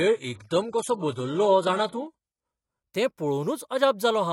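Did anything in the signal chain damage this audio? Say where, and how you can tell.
Yes. For the first 2.83 s the speech sounds dull and smeary, with nothing above 11.4 kHz and stronger codec artefacts, then quality jumps with no gap. This is an adaptive stream starting at a low bitrate, fitting roughly 12 kbit/s HE-AAC, before stepping up to 96 kbit/s AAC-LC.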